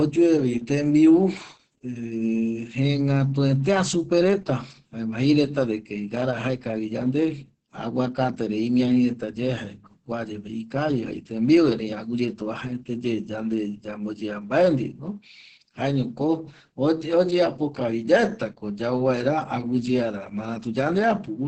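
Opus voice compression throughout: a bit-starved SILK coder removes everything above 8.6 kHz and codes excitation coarsely, leaving speech muffled, hoarse and robotic.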